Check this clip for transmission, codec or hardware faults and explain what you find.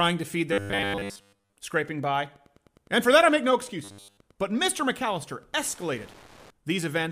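Two kinds of fault are present in this speech clip.

Robotic sound from repeated short buffers, 0.53 to 1.57 s (just after "to feed") and 3.84 to 4.20 s: a rigid, metallic buzz at 100 Hz, likely from starved buffers replaying 10 ms chunks over most of the audio.

Wi-Fi interference, 2.13 to 6.50 s: faint steady ticking, about 30 dB below the speech, every 102.4 ms, as nearby Wi-Fi beacons are rectified by the audio circuit.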